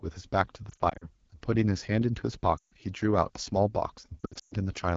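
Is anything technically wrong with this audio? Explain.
Yes, two faults are audible.

Throughout the clip, the AMR wideband (HD Voice) codec is running at a low rate, which fits the 8.85 kbit/s mode. The pulse-excited vocal tract model leaves the speech plainly rough and raspy. On a spectrogram, content stops near 7 kHz, and the 6.4 to 7 kHz strip looks like smooth noise rather than harmonics.

Lost AMR speech frames occur at 0.69 to 1.08 s, 2.58 to 2.74 s and 4.20 to 4.54 s. When frames failed their checksum, the decoder repeated the last good pitch and vocal tract settings at falling gain. This produces warbles in the first and third spans, where the gaps are scattered. The second span loses 140 ms and drops to near silence within two frames. The 120 ms run in the third span fades almost to silence. In the waveform, the envelope collapses at each spot. On the spectrogram, the harmonics smear flat before recovering weakly.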